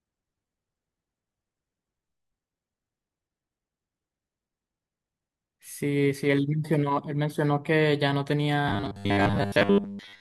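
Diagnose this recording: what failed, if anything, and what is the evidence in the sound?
Robotic sound from repeated short buffers appears from 8.68 s to the end: the speech becomes a rigid, metallic 100 Hz buzz. The likely cause is a starved driver or buffer looping a 10 ms chunk. Unlike codec warble, the pitch stays fixed.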